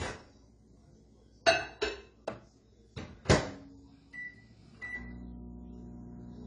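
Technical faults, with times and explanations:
Throughout, AAC compression: the sound is dull and smeared, with nothing above 10 kHz, and a warbling, fizzy texture clings to sustained and noisy parts, so the damage is plainly audible. This is likely AAC-LC coding at a low bitrate, which fits a rate around 24 kbps. With so few bits per frame, the encoder lowered its cut-off, quantised the remaining frequency lines coarsely against its hearing model, and left gaps in the spectrum or filled bands with substitute noise.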